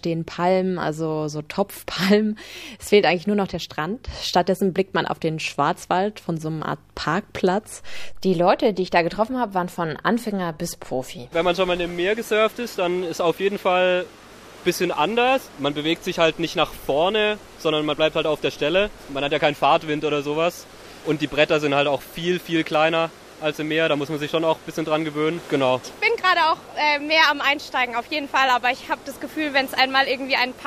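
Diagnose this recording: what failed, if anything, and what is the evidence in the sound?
Mains hum in the analogue wiring: a steady 50 Hz tone sits under the audio throughout, about 35 dB below the signal, from a ground loop or transformer coupling.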